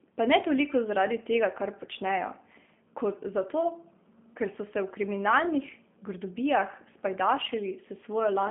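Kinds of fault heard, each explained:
G.729 codec: the speech has passed through a low-rate telephone codec, which fits an 8 kbit/s G.729A link. Each 10 ms frame is rebuilt from a vocal-tract filter, a pitch predictor and a few pulses rather than the original waveform, giving a plainly audible rough, slightly synthetic edge throughout. On a spectrogram, energy sits in a telephone band of about 150 Hz to 3.4 kHz, with nothing above 3.6 kHz. The waveform's fine detail is replaced by smoothed, pulse-driven texture.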